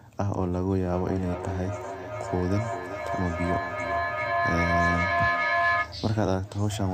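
Feedback echo between two devices runs from 0.86 s to 6.05 s in this speech recording. Each phrase returns roughly every 400 ms, thinner and more ringing with each pass. Two devices in the same room are on one call, so one plays what the other's microphone sent, and that microphone captures it again. Neither echo canceller removes sound from the other device. The loop is loud enough that the repeats build up to about 2 dB above the speech rather than dying away.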